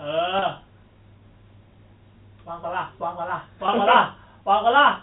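Speech over a G.711 telephone path, band-limited below 4 kHz, has two brief dropouts bridged by packet loss with pitch repetition: 0.39 to 0.42 s (30 ms, which fits three lost 10 ms packets) and 3.66 to 3.68 s (20 ms, about two packets). The receiver loops the last pitch period, so each gap sounds like a short, slightly held buzz. A waveform shows identical repeated cycles, and a spectrogram shows frozen, flat harmonics for that stretch.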